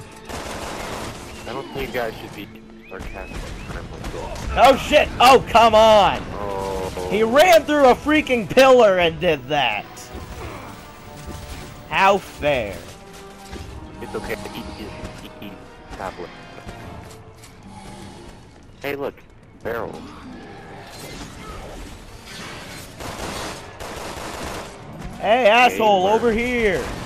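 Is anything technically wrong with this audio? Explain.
Yes. From 9.2 to 12.85 s there's video or display buzz: a screen feed leaks in, giving a faint 50 Hz field-rate buzz with hash and a 15.6 kHz line whine, roughly 35 dB down.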